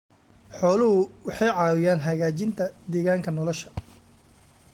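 Speech with clock drift between sender and receiver, the sender's clock running roughly 4 percent fast, so the receiver's buffer keeps overfilling and it must discard audio. Repeated timing corrections run from 0.11 to 4.72 s, trimming short pieces to hold a 104 percent pace, seen as small uneven splices and discontinuities in the waveform and spectrogram.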